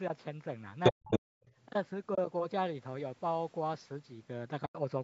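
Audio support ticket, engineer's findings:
Other side's voice leaking through: far-end speech bleeding into the near-end speech at 0.83–0.92 s and 1.11–1.2 s, loud and on top of it; much fainter again at 1.43–1.51 s. Likely residual loudspeaker echo the canceller didn't fully remove.

Speech suppressed in double talk: near-end speech dips hard, by roughly 40 dB at its deepest, for about 0.2 s at 0.92–1.11 s, between the leak bursts. Likely the canceller ducking everything while both sides talked at once.

Background gated by the echo canceller: room sound drops out briefly at 1.39–1.43 s, about 27 dB down, then comes back. Canceller clamped the mic while the loudspeaker was active.

AAC frame loss with muting: soft-edged holes at 2.15–2.18 s (30 ms) and 4.66–4.75 s (90 ms). Fits three and nine lost 10 ms frames zeroed by the decoder, with the overlapping windows fading out and back in.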